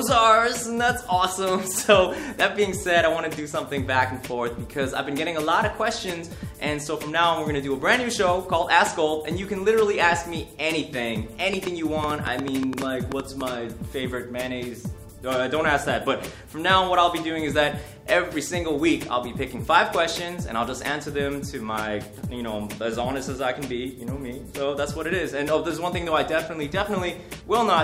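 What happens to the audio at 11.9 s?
A train of clicks runs from 11.54 to 13.42 s. Around 15 similar pulses arrive at about 7 per second, unevenly spaced, peaking roughly 15 dB above the sound. They tick over the audio and its pauses. Likely cause: interference, or a faulty connection or power supply.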